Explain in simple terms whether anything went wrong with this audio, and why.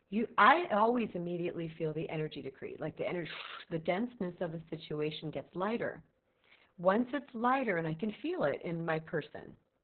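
Yes, the speech is damaged by heavy Opus voice compression, squeezed so hard that detail was lost. You hear it from the first second to the last: everything above about 4.3 kHz is gone, so the voice sounds muffled like an old telephone line, and it also turns hoarse and slightly robotic. A simple tone control or filter would only dull the sound; the rough, buzzy, synthetic texture shows the codec itself rebuilt the voice coarsely.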